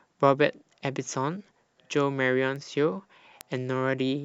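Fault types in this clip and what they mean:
Bit error spike: a flipped bit in memory or on a digital link throws a sample value off by a power of two and straight back, so you get a sharp broadband tick. Here there are two, at 2.56 s (about -26 dBFS) and a louder one at 3.41 s (about -14 dBFS).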